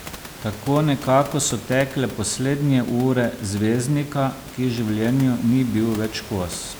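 The speech signal arrives intact through the system with no technical faults, and the only other sound is the room's own background noise, sitting about 17 dB below the speech as part of the original recording.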